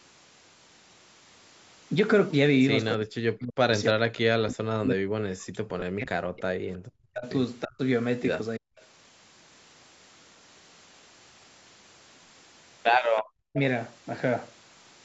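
From 2.98 to 3.71 s the talker's level falls sharply, by something like 40 dB at its deepest. This is speech suppressed in double talk, likely caused by the far end talking at the same time. The echo canceller could not tell the local voice from loudspeaker echo, so it attenuated everything. The same dipping and partial dropouts recur at 3.93–6.70 s (about three seconds in all), 6.96–7.25 s, 7.65–7.80 s, 8.57–8.75 s and 13.52–13.58 s, with the shorter ones dropping around 30 to 40 dB.

Inside the long suppressed stretch, at 5.80 s, there is a brief 20 ms glitch from lost LE Audio frames. The Bluetooth link dropped what fits two LC3 frames. The decoder filled the gap by repeating the previous spectrum with randomised phase, which turns the sound into a short noisy smear rather than a clean cut.

At 8.80 s a faint delayed copy of the voice appears, around 35 dB below the speech and trailing it by 0.33 s. 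This is an echo leak, likely from a loudspeaker on one side whose echo canceller let part of the microphone pickup through and sent it back. It returns at 13.17 s with the same 0.33 s delay but much louder, only about 15 dB under the speech.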